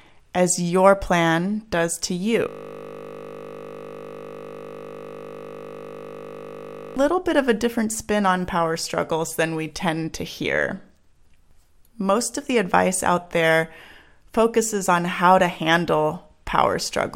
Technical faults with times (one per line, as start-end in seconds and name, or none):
2.49-6.96 system hang loop